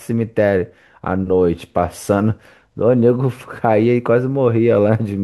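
Speech recording with no audible technical faults.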